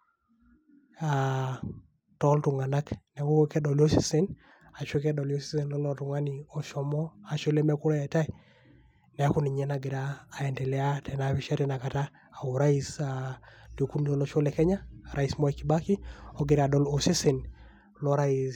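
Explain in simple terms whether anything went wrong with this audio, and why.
Nothing went wrong here: the speech comes through as one steady, unbroken signal, with no technical faults to point to at any moment.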